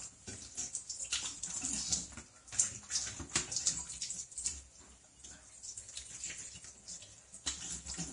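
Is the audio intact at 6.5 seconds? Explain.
No. At 6.5 s, as throughout the clip, the sound is hissy and grainy, with roughened tones and smeared attacks, and nothing above 10.6 kHz. The likely cause is heavy Vorbis compression, which fits a low bitrate of about 33 kbps. That bitrate leaves too few bits for the treble, so fine detail turns into coarse noise. On a spectrogram this shows as a flat ceiling at 10.6 kHz over patchy, speckled upper bands.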